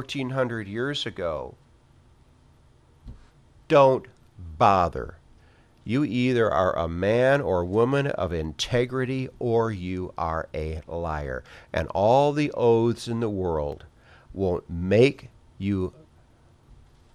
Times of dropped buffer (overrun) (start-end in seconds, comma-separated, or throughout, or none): 13.72